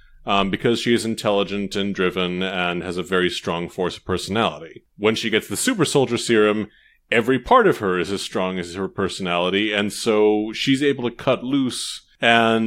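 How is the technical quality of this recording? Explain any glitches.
No glitches or technical faults can be heard anywhere.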